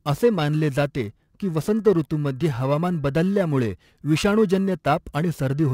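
Clock drift between sender and receiver runs through the whole clip. The sender's clock is roughly 3% slower than the receiver's, so the jitter buffer keeps draining and must be topped up. The result is small, unevenly spaced timing hiccups in the speech.

Periodic clock jitter is also present throughout. Interference wobbles the converter clock at around 1.5 kHz, adding sidebands at that spacing on either side of every component, strongest on the higher frequencies. It gives the speech a rough, metallic edge that drops away in pauses.

Repeated timing corrections run from 0.44 s to the end. To keep pace with the slower sender, the receiver repeatedly repeats short pieces, all in the same direction, running at 97% speed and adding roughly 150 ms overall. Each edit is small.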